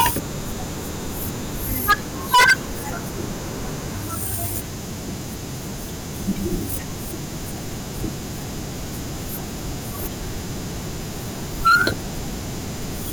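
Speech with hard clipping at 0 to 0.09, 1.89 to 1.93, 2.34 to 2.53 and 11.66 to 11.88 s. Peaks overdrive a stage by about 9 to 20 dB, so they flatten into harsh crackle.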